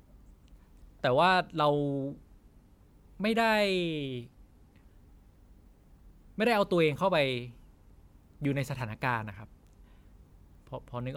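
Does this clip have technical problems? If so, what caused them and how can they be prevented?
No, there are no technical problems in this recording.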